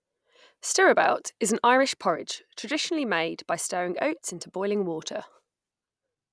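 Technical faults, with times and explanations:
Nothing technical stands out here; the speech comes through without any glitches or problems worth pointing out.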